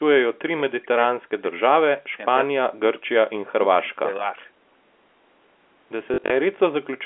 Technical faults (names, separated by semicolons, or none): speech suppressed in double talk; packet loss with last packet repeated